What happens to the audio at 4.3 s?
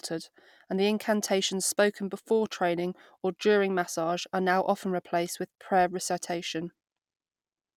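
Nothing goes wrong at 4.3 s; the speech carries on intact through that moment, with no dropout, click or distortion.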